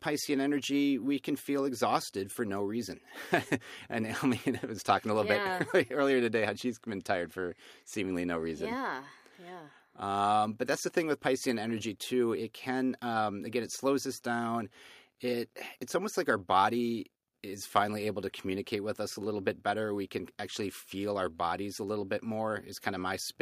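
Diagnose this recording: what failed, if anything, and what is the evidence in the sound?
Nothing stood out on listening to this speech recording that would point to a failure at any stage.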